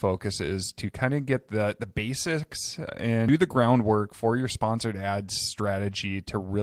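Nothing in this speech recording stood out as a technical problem on listening.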